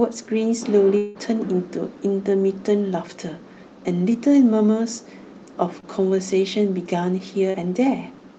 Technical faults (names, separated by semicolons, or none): long network dropout; short concealed packet loss